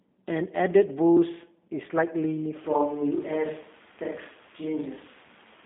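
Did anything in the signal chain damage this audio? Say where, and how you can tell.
Yes. Codec stage throughout: a G.729 codec. Nothing above 3.6 kHz, a 200 Hz to 3.6 kHz line band, and a rough, synthetic edge that fits 8 kbit/s frame-based coding.

From 2.64 s to the end it suddenly turns roomy and hollow at about the same level, with room noise roughly 25 dB down. That's likely a switch to a distant microphone.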